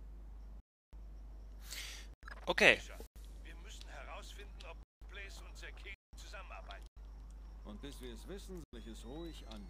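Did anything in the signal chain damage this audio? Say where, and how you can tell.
Yes, blocks of digital silence at the driver or buffer stage. The sound drops out at 0.60 to 0.93 s (about 330 ms), 2.14, 3.07, 6.87 and 8.64 s (93 ms each), and 4.83 and 5.94 s (186 ms each). Apart from the first, those lengths are whole multiples of one unit, which fits 4096-sample buffers that were not filled in time. On a waveform each gap is a flat, silent line. On a spectrogram it is a black column.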